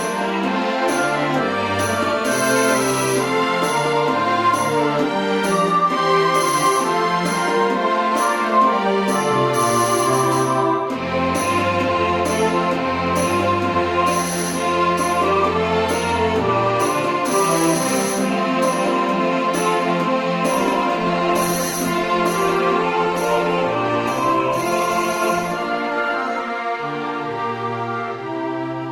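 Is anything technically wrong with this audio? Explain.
Yes. From 20.53 to 26.53 s the stream drops to a lower bitrate. The connection likely slowed, so the player switched to a leaner encoding, consistent with roughly 16 kbit/s Opus. Artefacts rise, and quality changes suddenly, without a gap.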